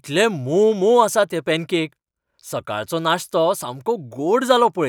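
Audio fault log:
No faults heard anywhere in this speech recording.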